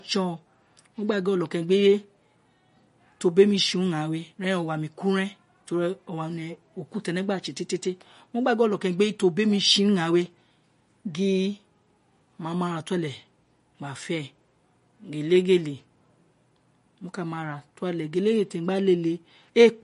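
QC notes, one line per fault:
Throughout, likely MP3 compression: nothing in the speech reaches above 10.6 kHz, so s sounds lose their top, and weak frequency lines flicker in and out between frames, giving a plainly watery, swirly texture that fits a starved bitrate around 40 kbps.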